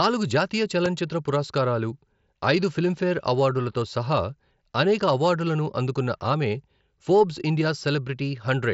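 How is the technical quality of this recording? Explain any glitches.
A single glitch stands out in the speech, heard through a Bluetooth mSBC headset path that leaves nothing above about 7.7 kHz. Loud pop, 0.86 to 0.88 s: a sudden voltage pulse, likely from a plug, switch or static discharge, lands on the signal as one sharp pop roughly ten decibels above the speech.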